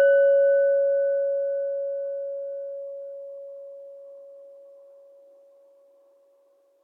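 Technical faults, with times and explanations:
No technical faults detected.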